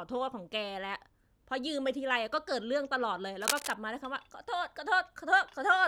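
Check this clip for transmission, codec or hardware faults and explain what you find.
One hardware fault stands out. From 3.41 to 3.74 s a dense, uneven scratching rustle rides over the speech, only slightly quieter than it. This is cable scratch noise, likely from a worn cable or connector being moved, its contact resistance jumping rapidly.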